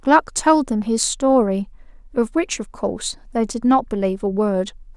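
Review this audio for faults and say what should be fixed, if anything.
No faults are audible; nothing needs fixing.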